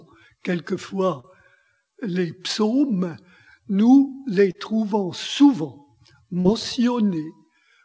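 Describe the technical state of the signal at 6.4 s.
At 6.41 to 6.47 s there is short concealed packet loss. About 40 ms of audio went missing, and the receiver filled the gap by extending the preceding sound before blending back. It is heard as a brief smear or wobble, and a spectrogram shows the spectral content frozen and stretched flat across that span.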